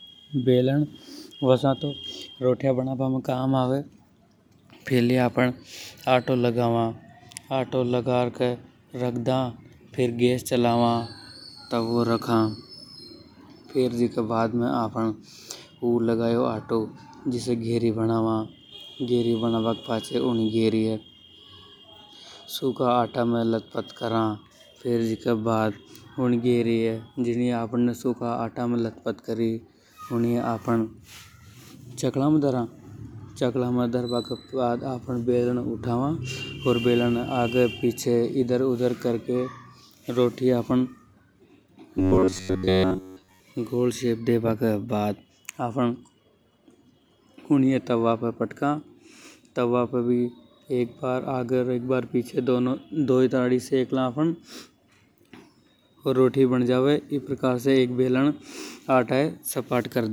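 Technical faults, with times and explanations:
41.97–43.4 s: robotic sound from repeated short buffers. The speech becomes a rigid, metallic 93.8 Hz buzz, likely from a roughly 11 ms chunk replayed while most incoming audio is skipped.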